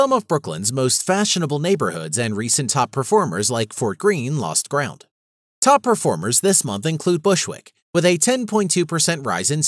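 No technical faults are audible anywhere in the speech.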